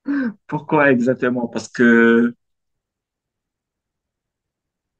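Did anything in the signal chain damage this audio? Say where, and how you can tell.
No, nothing in the signal chain damaged this audio, so there is no stage to point to.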